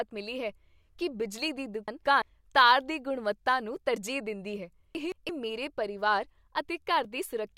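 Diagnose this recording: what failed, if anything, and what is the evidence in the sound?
Chunks out of order at the driver or buffer stage: at 1.88 to 2.22 s and again at 4.95 to 5.29 s, two adjacent 171 ms blocks play swapped. The speech jumbles at each swap, but unlike a dropout nothing goes missing.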